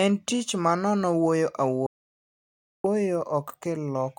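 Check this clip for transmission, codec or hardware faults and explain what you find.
One fault stands out: an audio dropout to silence from 1.86 s to 2.84 s, removing about 0.98 s of speech. The speech stops abruptly mid-flow and resumes just as suddenly, with no room tone in between. The likely cause is a momentary loss of the input signal, such as a link failure or disconnected device, while recording continued writing silence. On a waveform this shows as a flat line, and on a spectrogram as a dark vertical band.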